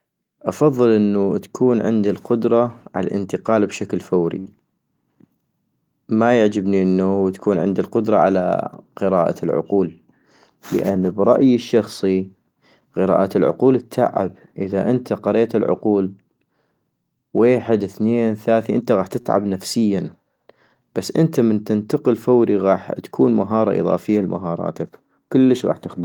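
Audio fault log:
4.39 to 4.49 s and 19.21 to 19.43 s: short stall from a late packet. Each stall comes just after "عالانتقال بشكل" and then "ثنين ثاثي انت غاح". A packet arrived late and the jitter buffer ran dry. The receiver held the last sound steady to cover the gap, 63 ms the first time and 41 ms the second. Then it carried on from the same place. Nothing is lost. A sound just lingers too long, with a faint buzz or dip.
9.72 to 9.97 s and 10.55 to 10.99 s: jitter buffer speed-up. The buffer had built up more audio than its target. To trim the delay, the receiver cut tiny pitch-period slices again and again, roughly 40 ms in each stretch. The first stretch runs at 111 % speed and the second at 106 %, which ends just before "برأيي الشخصي". Pitch stays the same, but the speech sounds briefly rushed.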